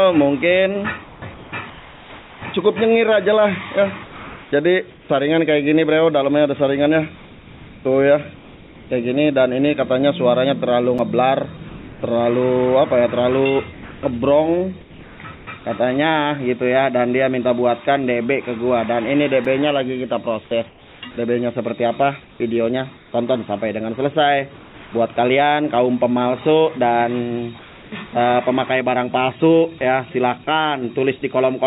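Comfort noise in place of the background appears at 1.04–2.42, 4.04–5.09, 7.16–8.9, 11.69–12.02, 13.73–15.47, 20.69–23.12, 24.56–24.92 and 27.59–27.92 s. In each pause the background turns steady and featureless, about 2 dB quieter at 11.69, 24.56 and 27.59 s, likely because discontinuous transmission left the receiver to synthesise noise. Blocks of digital silence at 10.98 and 19.45 s each last 5.8 ms, which fits a 256-sample buffer going unfilled. The hard cut to zero and back makes each one a sharp tick. Nothing is heard above 4 kHz, consistent with a G.711 narrowband call path.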